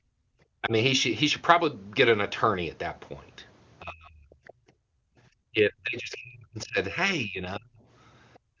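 Speech clip carried through a call path, with echo-canceller faults throughout. Background gated by the echo canceller takes the room sound down by about 28 to 31 dB at 0 to 0.33 s, 4.57 to 5.17 s and 8.39 to 8.6 s; the waveform's noise floor collapses to near-flat there. Speech suppressed in double talk dips the talker by roughly 10 dB at 0.61 to 0.73 s and by roughly 35 dB at 3.83 to 4.29 s and 5.51 to 7.81 s, likely because the canceller mistook overlapping speech for echo, leaving pinched envelopes and faded harmonics on a spectrogram. The other side's voice leaking through appears as faint scraps at 4.47 to 4.53 s and 8.34 to 8.39 s, about 25 and 35 dB below the speech, likely residual loudspeaker echo, visible as weak, thin streaks. The spectrum stops at 8 kHz, as the call's wideband processing would give.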